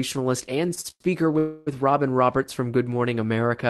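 From 0.69 to 1.02 s the speech hits repeated stalls, a stutter: the jitter buffer kept running dry as packets arrived late, so the receiver stretched the last sound across four short gaps, the longest 99 ms. About half that stretch is filler, so it drags and catches, but nothing's lost.

Then at 1.38 s there's a call audio freeze lasting to 1.69 s: roughly 283 ms where the last sound just hangs as a fading buzz rather than going silent, likely because packets got held up in transit, before the speech picks up where it stopped.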